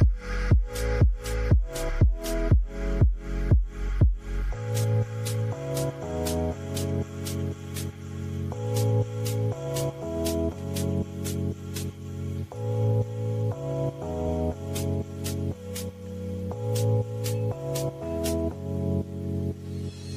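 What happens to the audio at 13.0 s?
Nothing goes wrong at 13.0 s; the audio plays through that moment intact, with no dropout, click, distortion or other fault to be heard.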